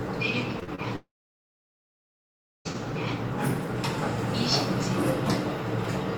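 Right at the start there's a cluster of short concealed packet loss: 0.59 to 0.63 s, straight on to 0.69 s, then 0.75 to 0.80 s. Each gap of 20 to 40 ms was patched by stretching the preceding sound, so you hear quick smears and a little wobble. Then from 0.96 s to 2.67 s the sound thins into a fading fill and drops to about 1.6 s of silence before resuming with that stretch gone. That's a long network dropout, likely from a stall in arriving audio.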